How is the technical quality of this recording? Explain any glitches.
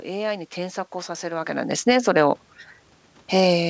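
Two automatic gain glitches occur in quick succession in the middle of the clip. The audio also carries a steady room background and has nothing above 8 kHz, which fits a wideband call codec such as G.722.

From 1.63 to 2.04 s, automatic gain falls by about 7 dB. Just after the talker shifts position around 1.5 s, the gain control judges the input too loud or its background too strong and pulls its gain down over roughly 0.4 s. The sound and the room background sink together. On a waveform the envelope tapers downward, and a spectrogram shows every band dimming at once, noise floor included.

From 1.96 to 2.53 s, automatic gain rises by about 5 dB. The control judges the input too quiet and lifts its gain back over about half a second. The voice and the background swell together. The waveform envelope widens again, and a spectrogram shows all frequencies brightening uniformly, including the gaps between syllables.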